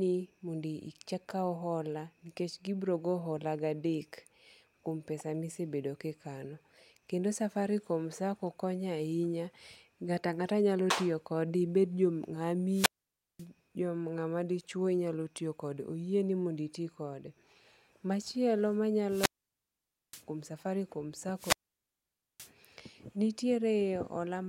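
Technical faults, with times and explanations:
12.71–13.46 s, 19.07–20.24 s and 21.34–22.51 s, wireless microphone squelch dropout: the analogue radio link faded until the receiver's squelch muted its output, so a brief swell of hiss gives way to near silence lasting 0.54 s, 0.88 s and 0.87 s, before speech resumes, first at "nga'ma dichuo nyalo tiyo".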